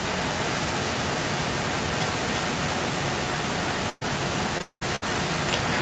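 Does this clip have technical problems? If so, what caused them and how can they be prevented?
Yes. An echo leak runs from 0.03 s to the end: a delayed copy trails the speech by about 342 ms, only a little quieter, likely from a loudspeaker whose echo canceller let it through. Better echo cancellation or a headset prevents it.

A burst of packet loss hits at 3.89 to 4.03 s, with about 120 ms missing and the last sound stretched to cover it. A steadier network or deeper jitter buffer would help.

Repeated packet loss sounds robotic from 4.58 to 5.04 s, with four gaps, the longest 196 ms, patched over most of that stretch. Fixing the unstable connection stops it.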